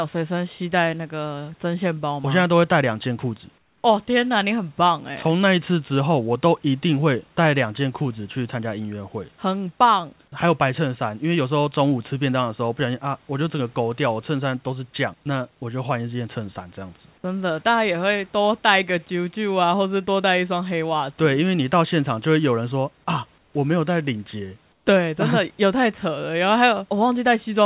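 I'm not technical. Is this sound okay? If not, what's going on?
No. In three brief pauses, at 3.58 to 3.84 s, 23.38 to 23.54 s and 24.72 to 24.86 s, the room background gives way to comfort noise: a smooth, quieter hiss, likely because the call stopped sending during silence. It is not a dropout, since the sound never goes fully silent.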